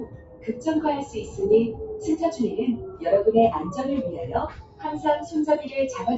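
A noise suppressor applied to music or sounds runs throughout. Built for speech, it treats steady sound as noise, so levels pump by about 15 dB. Sound is cut by the noise suppressor at 0.00–0.66 s, 1.05–1.39 s, 2.84–3.02 s and 4.49–4.84 s. Held sound sinks by up to about 13 dB, and tails thin out.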